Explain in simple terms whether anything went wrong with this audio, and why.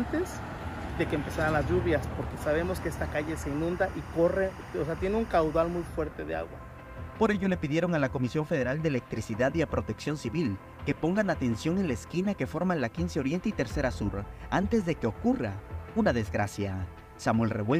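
Low bit depth without dither runs through the whole clip. Quiet passages sound grainy and the graininess shifts with the sound. The likely cause is audio stored with too few steps, which fits about 9 bits, and rounded without added noise to smooth the steps.

Timecode bleed sits behind the sound from 2.40 to 5.88 s as a chirping warble. A neighbouring timecode signal, ticking along at about 24 frames per second, leaked in. Its square wave flips between pitches near 1 kHz and 2 kHz.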